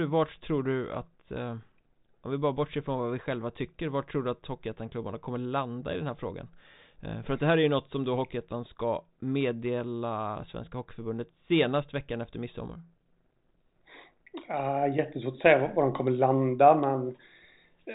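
Speech over a G.726 path at 40 kbit/s, band-limited to about 3.8 kHz, with no technical faults to report.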